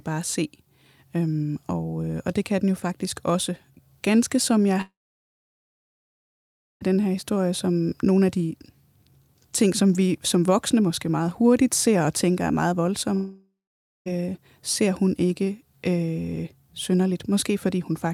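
Speech with two long network dropouts. After "som jeg", the sound breaks at 4.81 s and returns at 6.83 s with "den her historie som". About 2 s of audio is gone, and roughly 1.9 s of that is near-silence. After "og tænker er meget", a second gap runs from 13.15 to 14.08 s, ending at "ser hun ikke øh". It loses 0.92 s, with about 0.5 s silent. Each gap opens with a short fading buzz or hiss, likely the receiver stretching the last sound before giving up.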